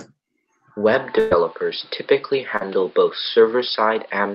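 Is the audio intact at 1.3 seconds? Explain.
No. From 1.19 to 1.33 s the sound smears into a held, fading continuation of what came before, then picks up about 120 ms further on with that stretch gone. This is a burst of packet loss: the receiver concealed the gap by extending and tapering the last audio for roughly 114 ms. Throughout that moment the audio is also dull and boxy, with nothing above 5.2 kHz, a few decibels off in level and carrying a faint new noise floor, from 0.94 s onward. The likely cause is an input switched to a poorer device, with no silence at the changeover.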